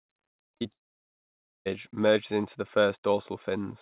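At 0.52 s, 0.57 s and 0.63 s the speech catches three times in quick succession. Each is short concealed packet loss. A few tens of milliseconds of audio arrived too late to decode. The receiver covered each gap by extending the sound just before it, then blended back into the real signal. The first patch runs about 14 ms, the second about 31 ms, the third about 19 ms. Together they give a quick smeared flutter.

At 0.72 s the sound stops. Nearly a second of silence follows, until 1.67 s. The speech then resumes on "merges into the", with the gap simply missing. This is likely a long network dropout. No audio reached the receiver for about 940 ms, and it could only continue the last sound before it faded away. The band-limited sound, with nothing above 4 kHz, fits the G.711 mu-law call codec the speech passed through.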